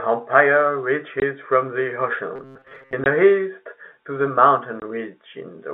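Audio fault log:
1.20–1.22, 3.04–3.06 and 4.80–4.82 s: packet loss filled with silence. Each 20 ms hole, fitting one lost packet, is a flat waveform gap with hard edges and a blank vertical strip on the spectrogram.
2.36–2.94 s: robotic sound from repeated short buffers. A rigid metallic buzz at 133 Hz, likely from a block of about 7.5 ms replayed while most real audio was skipped. The spectrogram shows stiff, evenly spaced horizontal harmonics, and the waveform shows identical repeating cycles.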